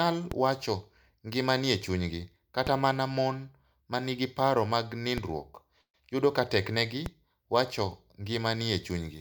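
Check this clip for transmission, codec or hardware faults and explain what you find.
Two kinds of fault stand out in this speech: a pair of DC steps and a brief call audio freeze.

DC steps at 0.32 s, which holds until 2.67 s just before "mana mon ma nigi", and at 5.18 s, holding until 7.06 s after "ma nigi paro mag". The waveform's zero line jumps to an offset and later jumps back, so each edge gives a low thump or click while the speech carries on unchanged.

Call audio freeze from 5.81 to 5.96 s, likely from packets arriving late and the jitter buffer running dry. The receiver filled about 125 ms with a fading continuation of the last sound, about 90 ms of it silent, then resumed where it stopped. Nothing is lost, but everything after it runs 125 ms later.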